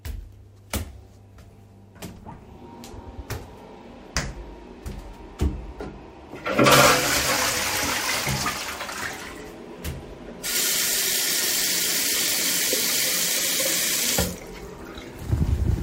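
No technical faults can be heard anywhere in this recording of sounds. There is nothing in it that calls for a timestamp or a fix.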